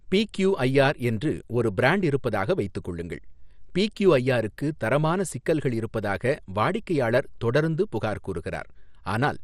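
MP2 compression runs through the whole speech clip, with plainly audible damage. Nothing sounds above 14.3 kHz, and the sound is dull with a gurgling, granular edge. The likely cause is a low-rate MPEG Layer II encode, around 64 kbps, that starves upper sub-bands of bits.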